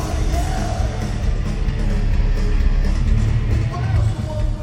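Throughout, sample clock jitter from an unsteady converter clock times each sample slightly off, adding a hiss, roughly 40 dB below the signal, that thickens on loud, bright passages. From 1.84 s to 2.92 s the audio slows by 5.9% and drops 105 cents, about a semitone, before snapping back, likely a drift correction step briefly changing the playback rate.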